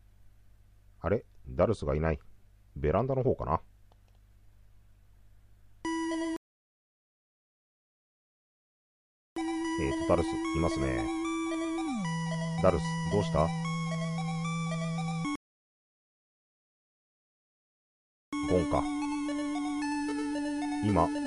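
At 6.36 s and again at 15.36 s, rebuffering stalls insert silences of 3.0 s and 2.97 s. Playback resumes exactly where it stopped, shown as flat, empty gaps in the waveform and spectrogram.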